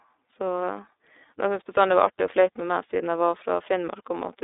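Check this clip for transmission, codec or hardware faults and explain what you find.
One fault runs through the whole clip: iLBC codec coding. The speech sounds narrow and slightly rough and synthetic throughout, with plainly audible codec damage and nothing above 3.8 kHz. The audio sits in a telephone band of roughly 300 Hz to 3.7 kHz. The character fits iLBC at about 13.33 kbps with 30 ms frames, where each frame's excitation is coded independently, leaving a coarse, synthetic texture.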